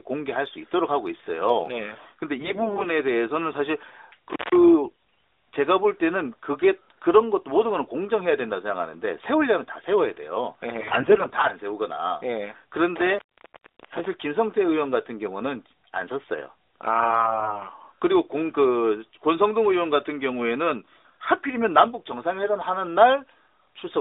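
From 2.40 to 2.87 s the speech turns hoarse and gargly while keeping roughly its pitch and loudness. These are AMR bit errors: the less protected bits of each 20 ms frame arrive corrupted, so the excitation pulses land in the wrong places and the finer pitch, gain and spectral values are wrong, while the frames are still accepted. The same scratchy distortion returns briefly at 4.84 to 4.94 s.

At 4.30 to 4.56 s an intermittent contact, a loose plug or cable opening, cuts the sound for about 190 ms, with crackle at both edges and only faint hiss in the gap.

AMR bit errors return from 10.80 to 11.52 s, with a rougher, more broken texture that points to a higher error rate, roughly one bit in seven. A longer contact dropout follows from 12.96 to 14.06 s, open for about 650 ms with faint hiss and crackle where it opens and closes. The last burst of AMR bit errors, from 16.98 to 17.63 s, is the harshest, consistent with about one bit in five corrupted, giving a hoarse, gargly quality. 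Underneath all of this runs narrowband mobile coding limited to about 300 Hz to 3.7 kHz, which fits the 12.2 kbps AMR-NB mode.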